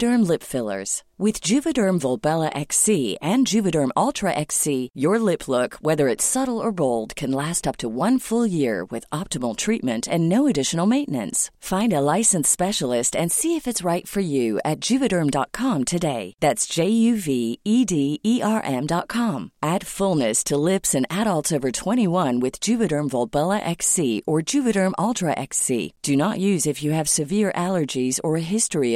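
No technical faults can be heard anywhere in the recording, and the signal stays steady and continuous throughout.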